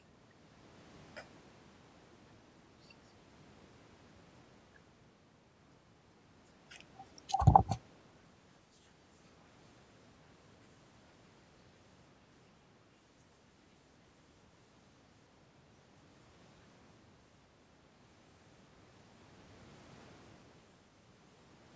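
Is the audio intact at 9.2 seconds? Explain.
Yes, at 9.2 seconds the speech is intact, with no fault at that point, only the ordinary sound of call microphone processing, which leaves nothing above 8 kHz and trims the lowest bass.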